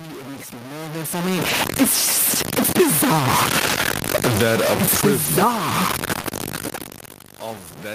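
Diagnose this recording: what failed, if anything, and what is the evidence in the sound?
The speech carries a coarse, grainy distortion that tracks the signal for the whole clip, with the error roughly as loud as the sound itself and quiet passages sputtering. This is low bit depth without dither, likely from truncation to about 4 bits at a sample-format conversion stage.

At the codec and network stage, a lost packet rebuilt from error correction shows as brief rough, noisy patches at 1.49 s, 6.17 s, 6.26 s and 6.33 s, each about 20 ms, plus a longer 80 ms stretch from 3.65 to 3.79 s. There is no gap, just a degraded low-bitrate copy.

In call processing, the automatic gain is falling from 4.17 to 5.58 s. The level sinks by about 7 dB, with the background dropping along with the voice. This is the gain control reacting to input it judged too loud or too noisy for its starting gain and backing off gradually.

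Automatic gain rising follows, overlapping from 5.49 to 5.95 s. After the input fell by about 17 dB, the gain control pushed back up by about 5 dB, so voice and background swell together over roughly half a second.

A short concealed packet loss appears twice at the network stage, from 6.21 to 6.26 s and from 6.30 to 6.33 s, each covering about 20 ms that never arrived. The decoder extrapolated the preceding sound, producing a brief smear before blending into the rebuilt packets that follow.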